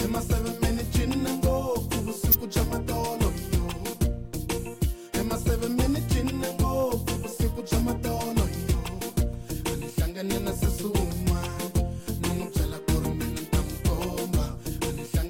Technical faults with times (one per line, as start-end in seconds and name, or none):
2.31-2.35 corrupt frame decoded